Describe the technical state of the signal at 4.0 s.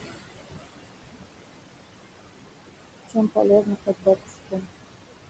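At 4.0 s the speech sits inside a stretch of speech cut by the noise suppressor, running from 3.86 to 4.07 s. The suppressor misread this part of the speech as background noise and pulled it down with the noise, by as much as about 21 dB, for a total of around 150 ms. The affected sounds come across as swallowed and faint.

Noise suppressor artifacts are also present at this point, as they are throughout. The suppressor lowers the bands it treats as steady noise by about 21 dB, frame by frame, so the residual room noise shifts in level under the speech.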